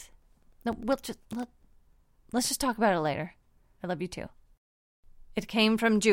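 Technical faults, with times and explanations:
0.13 to 1.93 s, periodic USB or driver dropouts: the speech is broken by about twenty small ticks, one every 0.1 s, each a gap of roughly a millisecond filled with silence, as something briefly blocks the USB bus or audio driver on a fixed schedule. Random clicks or crackle would arrive unevenly, and buffer underruns leave longer, irregular holes. These tick like a metronome, are audible only where there is signal, and disappear after 1.93 s.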